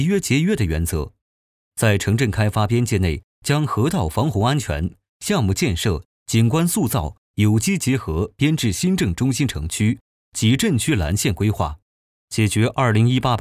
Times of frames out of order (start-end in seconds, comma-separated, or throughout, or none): none